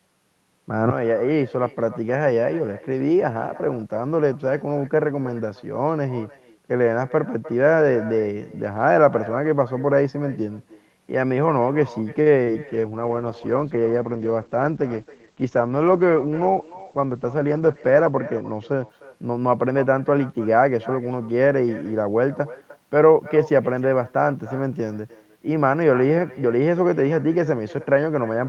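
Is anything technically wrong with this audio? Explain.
Yes, there are several faults: one runs through the whole call and four fall close together in the middle.

Echo with no canceller is present throughout. The far end's loudspeaker feeds back into its microphone and nothing removes it. Every phrase therefore returns about a third of a second later, about 19 dB quieter, as a thin shadow trailing the speech.

A short stall from a late packet occurs at 12.21–12.28 s. A packet arrived late and the jitter buffer ran dry, so the receiver held the last sound for 46 ms until the packet arrived. Nothing is lost, but the sound hangs briefly with a faint buzz or dip, and the delay grows by 46 ms.

Short concealed packet loss follows at 12.44–12.54 s. About 20 ms of audio never reached the decoder, and the receiver covered the gap with 25 ms of synthesized continuation before blending back into the real signal. 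The result is a quick smear or wobble in the speech.

A call bitrate drop runs from 12.6 to 18.95 s. The bandwidth estimate fell and the encoder was starved of bits, which fits a drop from roughly 40 to 11 kbps. The audio bandwidth shrinks from 12 kHz to 8 kHz, and the speech sounds muffled for about 5.6 s at its worst.

A jitter buffer speed-up occurs at 14.69–15.45 s. Excess buffered audio was trimmed by cutting out short pitch-period pieces, about 70 ms in total. Speech in this stretch runs at about 107% speed with unchanged pitch and sounds slightly hurried.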